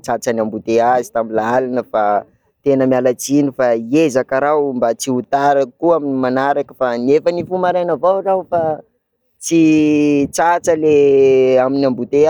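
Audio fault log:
The speech signal holds steady and intact throughout, with level, timing and continuity all behaving as expected for an ordinary recording.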